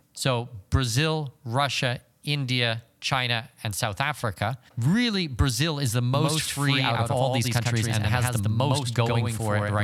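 Speech, and from 6.14 s to the end a doubled audio track appears: a second full-band copy trails the original by roughly a tenth of a second, somewhat quieter, starting abruptly with no decay or room colour. The likely cause is the signal being captured twice through a slower parallel path.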